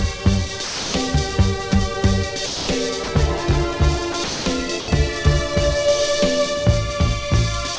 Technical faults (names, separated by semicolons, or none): sound dropped by the voice detector